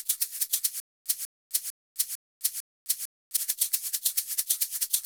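From 0.8 s to 3.37 s the audio falls into a stutter with silent gaps. A 194 ms fragment repeats five times. Each repeat is followed by 257 ms of dead digital silence, giving a steady 451 ms cycle. The player or stream likely stalled and replayed its last buffer on each retry, so the intervening audio is lost.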